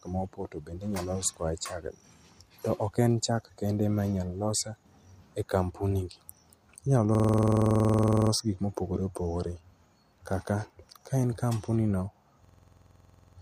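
At 7.15 to 8.31 s and again at 12.45 to 13.38 s there's a system hang loop: the system stalls while the hardware keeps replaying one 46 ms slice of speech, a rattly stutter at about 21.5 Hz, which fits a 2048-sample buffer. Nothing seems lost around them.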